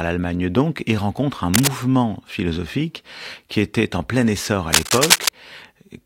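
A worn cable, connector or control being moved likely causes the cable scratch noise in this speech recording. Its contact resistance jumps around and injects dense, ragged bursts of noise. The first scratch runs from 1.54 to 1.69 s, after "donc et rencontre un" and before "philosophique qui était en", at roughly the level of the speech. The second, longer rustle lasts from 4.72 to 5.29 s, following "en plein essor à", and sits somewhat above the speech.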